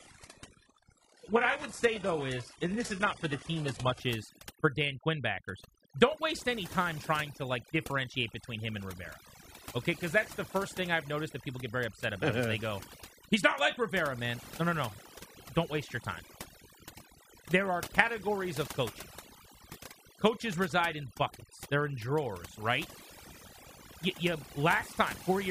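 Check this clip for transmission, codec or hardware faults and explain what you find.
Two faults are audible in this speech recording: one runs through the whole clip and one affects only the opening.

Throughout, the background drops and breaks up into twinkling specks, and the voice's quieter parts seem to dissolve. This is overdone noise removal. A noise reduction stage set far too aggressively pushes individual frequency bands down or out whenever they sit near its noise estimate, and soft components of the voice get removed along with the noise.

From 0.0 to 4.0 s the treble is missing, with nothing above 11.5 kHz, and what high end remains sounds synthetic, with stronger codec artefacts. At 4.0 s the sound suddenly becomes clearer and fuller, with no gap. This is an adaptive stream starting at a low bitrate. The player began on a cheap version of the stream to start quickly, and that version sounds like a parametric codec at roughly 12 kbit/s. 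Once it had measured the connection, it stepped up to a version consistent with about 96 kbit/s AAC.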